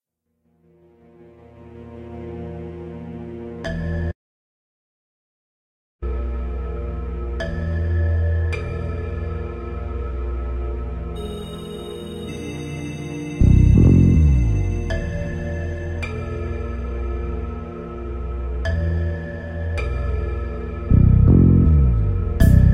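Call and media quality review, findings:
Frames out of order at 3.64 s and 13.75–13.89 s: brief garbled flutter, adjacent runs of frames arrived out of order and were decoded that way, the first fitting two-frame blocks, the second three. Unlike a dropout, no time is lost and the sound just plays scrambled.

Audio dropout to silence, 4.12–6.02 s, about 1.91 s: sound cuts off abruptly and resumes mid-flow, the gap silent with no room tone. This is likely input loss upstream of the encoder. Unlike concealment or comfort noise, nothing fills the gap.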